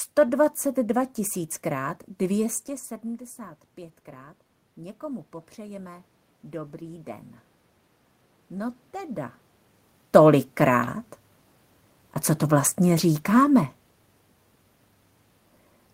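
From 3.02 to 7.34 s the automatic gain control is rising: after the input level falls by about 17 dB, the gain creeps up by about 6 dB over four seconds. Unlike the talker's move around 2.5 s, the room noise swells along with the voice.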